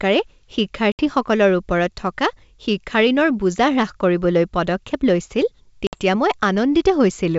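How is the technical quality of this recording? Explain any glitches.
The recording has two brief dropouts from packet loss on an ADPCM call, heard over clean G.722 wideband coding. At 0.92 to 1.01 s about 70 ms of audio is lost, and at 5.87 to 6.01 s about 60 ms, each equal to several packets. The decoder fills each gap with hard-edged silence. Its adaptive predictor and step size then no longer match the sender's, so the speech comes back slightly distorted before settling. That disturbed recovery is what sets it apart from a plain mute.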